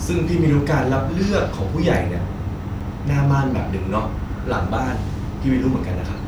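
A speech clip with one glitch: at 2.80 s there's a block of digital silence, a 5.8 ms hole where the sound drops out and back with no fade, so it lands as a tick. That length fits a 256-sample buffer the program didn't fill in time.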